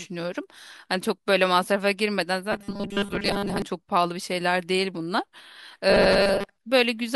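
From 2.52 to 3.62 s the speech collapses into robotic sound from repeated short buffers, a rigid metallic buzz at 200 Hz that loosely tracks the words; it returns, lighter, from 5.90 to 6.56 s. The likely cause is audio arriving too late, so the player loops the last 5 ms, most of the time in the first stretch and about half in the second. A spectrogram shows evenly spaced 200 Hz harmonic stripes; the waveform shows identical repeating cycles.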